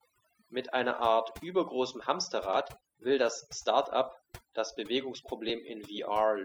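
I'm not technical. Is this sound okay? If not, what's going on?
No, it has overdone noise removal, running from start to finish of this speech clip. A noise reduction tool was set far too strong. It listens for what it thinks is background hiss, then shuts down any slice of the sound that comes close to that level. The quieter parts of the voice get caught too. The result is a background that drops and breaks up into little twinkling specks.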